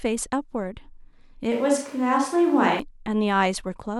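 A short speech recording in which the pickup changes abruptly at 1.52 s and changes back at 2.80 s. Between those points the voice becomes roomy and hollow, with thinner low end and background noise sitting roughly 30 dB below the speech, while the overall level stays about the same. This is a switch to a distant microphone, likely caused by the close microphone's signal dropping out so that a farther microphone carried the audio for that stretch.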